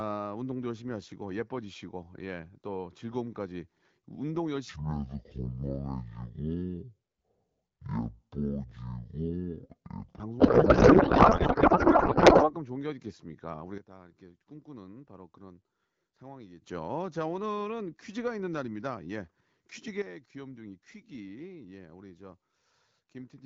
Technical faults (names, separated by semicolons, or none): section at the wrong speed; codec payload misread; sudden gain jump